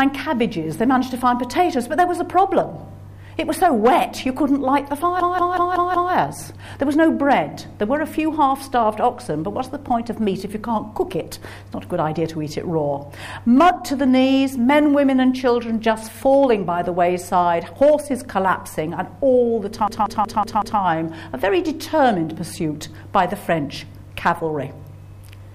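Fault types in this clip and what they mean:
System hang loop: The system froze while playback kept cycling one buffer. At 5.2 s and 19.9 s, a 186 ms slice repeats five times, stuttering at 5.38 Hz.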